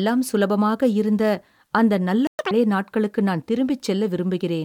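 At 2.27 s, just after "இருந்த அந்த நல்ல", the speech cuts to silence for 120 ms. This is a playback stall, likely the player running out of data or being blocked. From 2.39 to 2.51 s the speech rushes at double speed, pitched up roughly ten semitones, until "நாட்களுக்கு நான்". This is catch-up at higher speed: the player resamples its backlog to win back the lost time.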